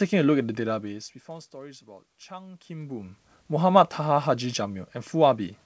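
No faults: the speech sits in a G.722 wideband channel at 64 kbit/s with nothing above 8 kHz, room noise stays in the background, and the level shifts around half a second and two and a half seconds come from the talker moving relative to the microphone.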